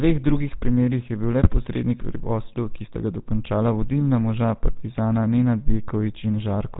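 Throughout, the speech carries the buzzy, gravelly roughness of the GSM full-rate codec at 13 kbps. The vocal tract is rebuilt from a filter driven by sparse, regular pulses, and nothing survives above 4 kHz. A spectrogram shows a hard ceiling at 4 kHz and smeared harmonics.

Just after "je bil le", from 1.43 to 1.50 s, GSM bit errors corrupt the decoder's filter, pitch or gain values, producing a brief squawk and gargle. The spectrogram shows a distorted smear lasting a few 20 ms frames.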